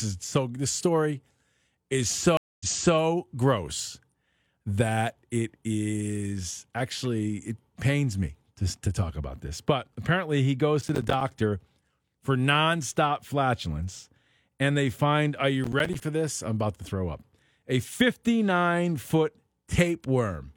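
From 2.37 to 2.97 s the sound drops out for about 0.23 s, then resumes roughly 0.37 s earlier than where it stopped, so a short stretch repeats. This is a stream reconnect: the connection broke, and the player reconnected and restarted decoding mid-stream from a resent burst.

From 10.81 to 11.21 s, just after "apparently he", and again from 15.64 to 16.04 s, between "they find are you" and "this I'm about to", a gritty crackle tears through the speech. This processor overload crackle comes from missed buffer deadlines, each leaving a hard-edged gap of silence. The pattern points to runs of around ten and fifteen buffers of roughly 10 ms.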